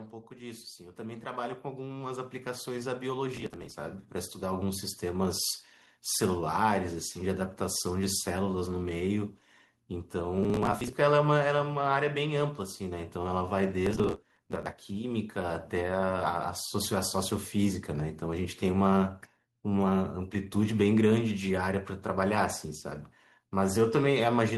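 Automatic gain rising runs from 0.27 to 18.51 s. The gain control judged the input too quiet and kept raising its level, about 16 dB overall, so the voice and the background swell together slowly rather than jumping.

Processor overload crackle appears from 3.37 to 3.72 s, 10.38 to 10.93 s and 13.86 to 14.72 s. Dozens of short buffers, around 10 ms each, missed their deadlines and were skipped, leaving hard-edged gaps heard as gritty tearing over the speech. The longest burst is the third.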